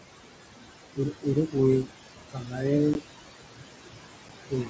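Noise suppressor artifacts run through the whole clip. The room noise, only about 9 dB below the speech, is pulled down by about 20 dB between phrases and rises again under them.

From 0.96 to 1.56 s, the noise suppressor cuts speech. It mistakes softer stretches, roughly a fifth of a second in all, for noise and turns them down by up to about 16 dB. They sound swallowed rather than missing.

From 2.3 to 2.65 s, the suppressor cuts speech again. Roughly 0.3 s of quiet speech drops by up to about 20 dB.

At 2.94 s there is unconcealed Bluetooth headset packet loss. A 15 ms hole with abrupt edges fits two lost mSBC frames. Its hard edges and short length set it apart from the suppressor's cuts.

At 4.29 s, a second unconcealed packet loss leaves a 7.5 ms gap, one frame's worth.

From 4.45 s to the end, the suppressor cuts the trailing speech by up to about 20 dB, roughly 150 ms in total, leaving the final sounds faint.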